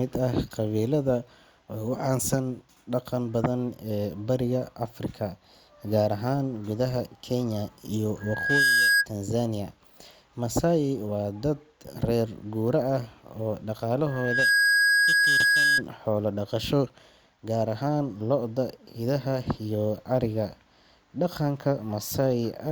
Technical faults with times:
8.20-9.06 loudspeaker feedback squeal
14.06-15.82 loudspeaker feedback squeal

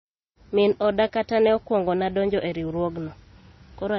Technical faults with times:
0.00-3.99 MP3 compression

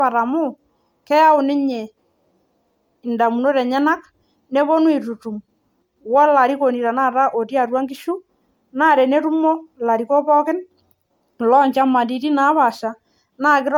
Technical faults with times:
0.00-13.77 generation loss

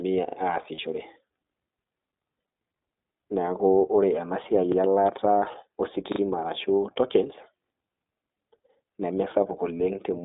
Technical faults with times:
0.00-10.25 iLBC codec
0.28-0.36 repeated buffer
0.74-0.80 lost iLBC frames
4.72-4.76 repeated buffer
6.12-6.20 repeated buffer
9.78-9.80 lost iLBC frames

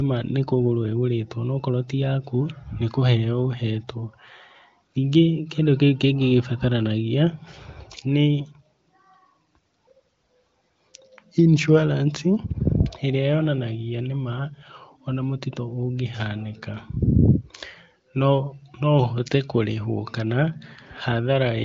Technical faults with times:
none

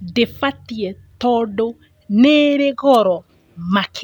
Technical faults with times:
2.93-2.97 wireless microphone noise hit

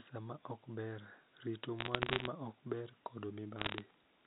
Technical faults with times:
1.79-2.27 bit errors on a digital phone line
3.58-3.82 bit errors on a digital phone line

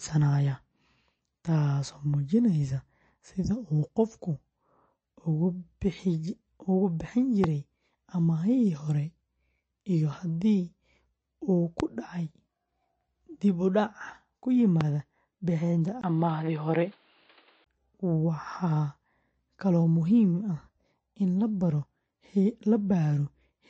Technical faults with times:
0.00-23.69 MP3 compression
7.44-7.46 loud pop
11.80-11.82 loud pop
14.81-14.83 loud pop
16.01-17.66 input switched to a poorer device

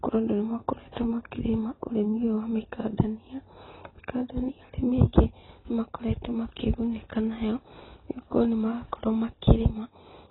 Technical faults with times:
0.00-10.30 AAC compression

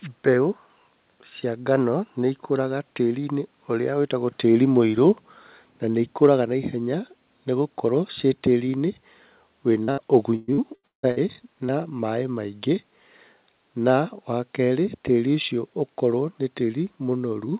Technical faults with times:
6.23-6.33 hard clipping
9.84-9.89 short concealed packet loss
9.91-9.99 burst of packet loss
10.35-11.18 repeated packet loss (robotic sound)
11.66-11.70 short concealed packet loss

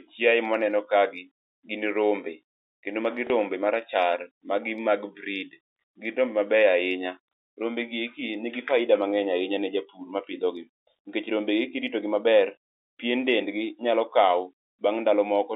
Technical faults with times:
3.27-3.30 packet loss with last packet repeated

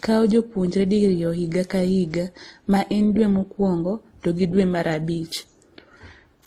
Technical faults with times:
0.00-6.46 transcoding between lossy codecs

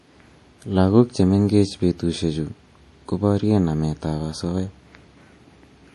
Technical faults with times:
0.00-5.95 MP3 compression

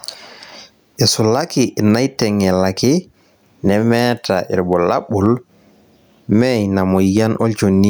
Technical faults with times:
0.00-7.90 gain pumping

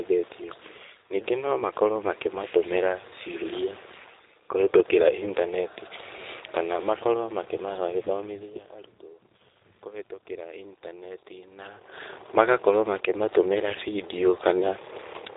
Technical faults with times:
0.00-15.37 G.729 codec

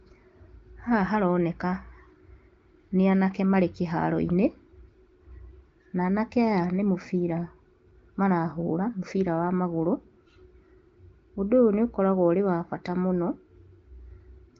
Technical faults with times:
none

